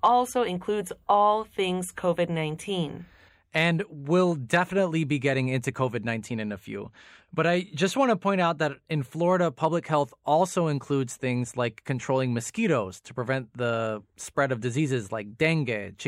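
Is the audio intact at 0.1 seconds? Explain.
Yes, just: hard clipping ends shortly before, from 0.05 to 0.08 s. Speech peaks about 1 dB over the limit are cut flat, giving a brief sharp crackle, unlike the rounded warmth of soft clipping.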